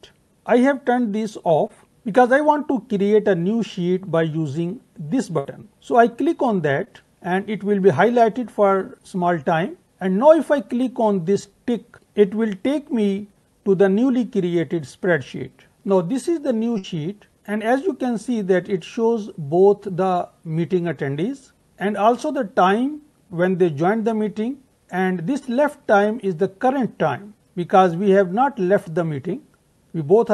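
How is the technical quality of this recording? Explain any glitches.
The recording shows four packet-loss events on a call path whose coding noise and roll-off near 12 kHz fit Opus at around 64 kbps.

Short concealed packet loss occurs at 1.67–1.71 s and 6.85–6.88 s. About 20 ms of audio failed to arrive in time. The decoder extended the preceding sound over the hole and blended back, leaving a brief smear or wobble.

Burst of packet loss occurs at 5.39–5.47 s and 16.78–16.95 s. Each time, roughly 60 ms went missing. The receiver synthesized about 55 ms by continuing the last sound and fading it, which produces a held buzz or dying hiss before the audio resumes further on.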